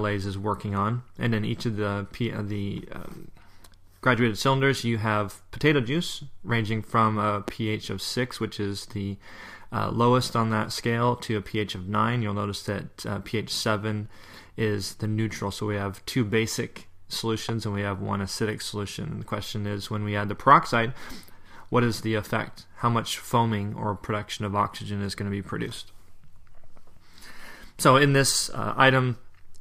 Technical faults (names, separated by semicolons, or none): loud pop